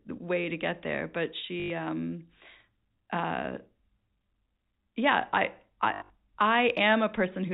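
At 1.6 s the speech breaks into a short robotic stutter lasting about 100 ms. That's packet loss with the last packet repeated: audio went missing, and the receiver kept replaying the final good chunk until fresh data arrived. The run buzzes at about 50 Hz, which fits 20 ms packets. At 5.94 to 6.1 s it happens again, with 140 ms lost in patches and the longest run 80 ms. All of this sits on the narrow, telephone-band sound of G.711 coding.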